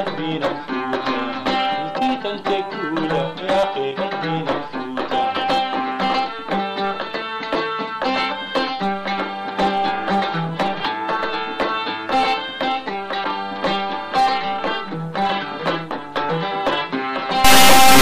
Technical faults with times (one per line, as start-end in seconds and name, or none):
17.44-18.02 integer read as float